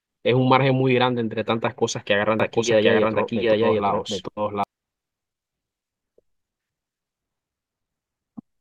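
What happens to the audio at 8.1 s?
Nothing goes wrong at 8.1 s; the speech there plays through cleanly, with no dropout, click, glitch or other fault.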